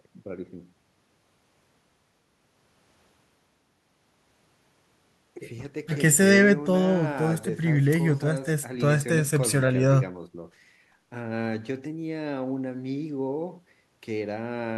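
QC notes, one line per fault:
No faults found, so there is nothing to log in the QC notes.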